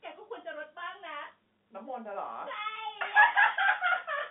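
Nothing is technically wrong with this speech recording, which is carried over G.711 telephone coding with its band limited to about 150 Hz to 3.5 kHz.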